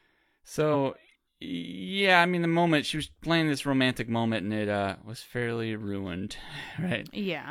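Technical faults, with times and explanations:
0.70–0.76 s, compressed frames skipped: whole encoded frames never play, so the speech jumps ahead by about a tenth of a second.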